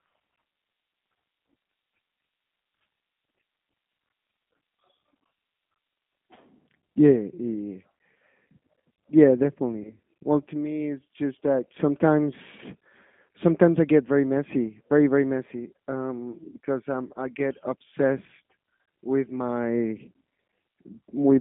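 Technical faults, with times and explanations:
throughout: G.729 codec. The speech is rebuilt from a vocal tract filter, a pitch predictor and a few pulses per frame, not sent as a waveform. The roughness and synthetic edge are plainly audible. Nothing passes below about 200 Hz or above about 3.5 kHz, so the sound is thin and narrow. The rough texture fits an 8 kbit/s G.729A stream. The coarse pulse coding cannot follow fine detail in the signal.
9.83 to 9.94 s: VoIP packet loss concealed by the speech codec. About 20 ms of audio went missing, consistent with a single lost packet. The decoder filled the gap by repeating its last pitch and filter settings at falling gain. That smears the sound into a brief, fading tone or noise. Each frame is predicted from the one before. So the speech stays weak or distorted until about 9.94 s, well after the gap itself.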